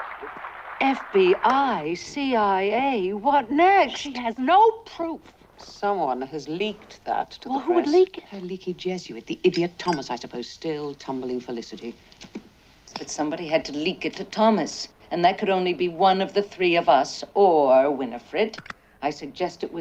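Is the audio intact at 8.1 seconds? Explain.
Yes, at 8.1 seconds the audio is intact, with no dropout, click, distortion or other fault present at that moment.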